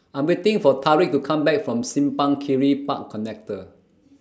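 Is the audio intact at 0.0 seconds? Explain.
Yes, the speech is intact at 0.0 seconds, with no fault at that moment.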